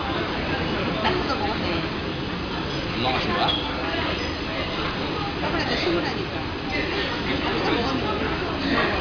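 Nothing goes wrong anywhere in this recording of sounds, so there's no fault to point to at any moment.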